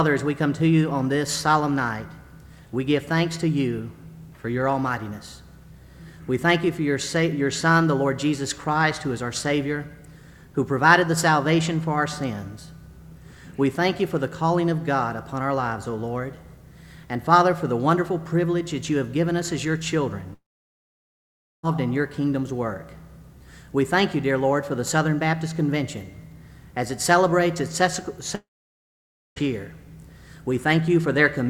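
At 20.33 to 21.65 s and again at 28.35 to 29.38 s, the sound smears into a fading buzz, then goes quiet for about 1.2 s and 0.9 s before resuming with material skipped. That points to a likely long network dropout, unlike a brief glitch or natural pause.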